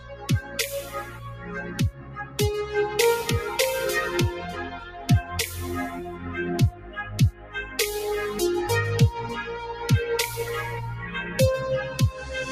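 A noise suppressor applied to music or sounds runs across the whole clip. A speech-tuned suppressor treats sustained, steady material and ambient tails as noise and pulls them down, while sharp onsets slip through. The gain it removes swings by around 10 dB, so the level keeps shifting rather than holding steady, giving a pumping, unstable quality as held parts sink and recover between transients.

Sound cut by the noise suppressor appears at 0.00–0.58 s, 0.76–2.38 s, 4.73–5.08 s, 6.71–7.02 s and 7.32–7.78 s. In each stretch the suppressor misjudged the material as noise and attenuated it beyond the surrounding level, by about 10, 11, 6, 9 and 10 dB respectively. The longest, near 0.8–2.4 s, also dips deepest, and the sustained or decaying portions drop away early while sudden attacks mostly come through.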